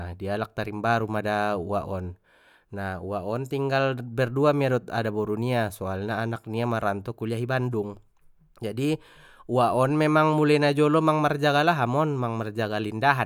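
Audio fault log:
Nothing stood out on listening to this speech clip.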